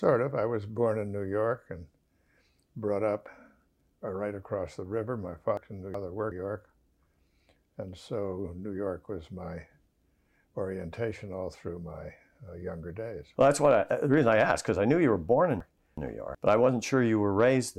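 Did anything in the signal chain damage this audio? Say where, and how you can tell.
Yes. Chunks out of order damaged it at two points, from 5.57 to 6.32 s and from 15.60 to 16.35 s. Each span holds two blocks of about 0.37 s played in swapped order. One block arrived a chunk late and follows the one it should precede. Nothing is missing, but the sound jumps and doubles back, and there are three hard joins. This points to the buffer stage, which fits blocks of about 370 ms.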